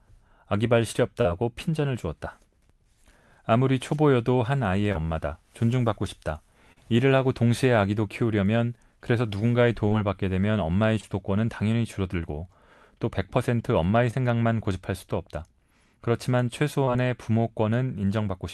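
Short concealed packet loss occurs at 1.21, 4.92, 6.72, 9.89, 11.00, 14.11 and 16.85 s. Each time 20 to 40 ms of speech arrived too late, and the decoder extended the preceding sound to bridge it. The result is a brief smear or wobble.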